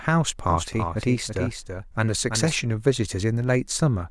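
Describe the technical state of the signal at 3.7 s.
At 3.7 s the speech signal is intact, with no audible dropout, clipping, distortion or other fault at that moment.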